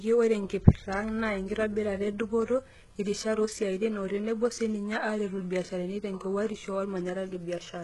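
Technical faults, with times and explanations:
Throughout, HE-AAC compression: the speech keeps a bright top, but s sounds turn heavily gritty and metallic, which fits a bitrate near 12 kbps. The treble is likely rebuilt from copied lower bands. A spectrogram shows blocky, repeated high-band patches ending abruptly at 11.5 kHz.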